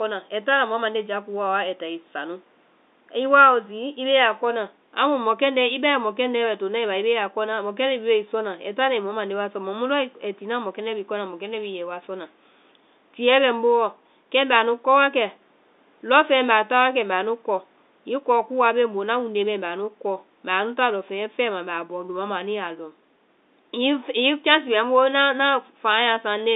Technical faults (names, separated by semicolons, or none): none